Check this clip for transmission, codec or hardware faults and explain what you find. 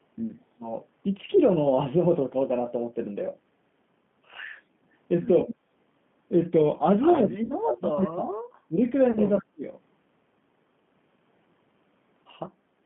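Four faults can be heard: a low-bitrate speech codec throughout, a brief gating of the background, a stretch of suppressed speech, and two concealed packet losses.

The G.729 codec, in its G.729A form at 8 kbit/s, is present for the whole clip. It models each 10 ms frame as a vocal tract filter plus a pitch predictor and a few pulses. Everything is held to a line band of 150 Hz to 3.5 kHz. The damage is plainly audible. The speech sounds thin, rough and slightly synthetic, and the upper consonant detail is missing.

Background gated by the echo canceller occurs from 5.54 to 5.68 s. The canceller judged the far end active and pulled the microphone path down by about 13 dB. For roughly 150 ms the room sound dips sharply. Then it snaps back when the canceller releases. The effect is a brief hole in the ambience rather than a change in the talker.

Speech suppressed in double talk runs from 7.23 to 8.38 s. 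The speech level falls, at its worst by around 30 dB, and breaks up in pieces over roughly a second. The likely cause is both ends talking at once. The echo canceller then could not tell the local talker from loudspeaker echo, so it attenuated both. The voice comes through as patchy and muffled.

VoIP packet loss concealed by the speech codec appears twice. The first is at 7.44 to 7.55 s, with 60 ms lost, which fits three missing packets. The second is at 9.11 to 9.19 s, with 40 ms lost, consistent with two packets. In each gap the decoder repeats its last pitch and filter at falling gain. You hear the sound stretched into a buzzy tone or coloured noise that fades. The voice stays weak briefly after real packets resume.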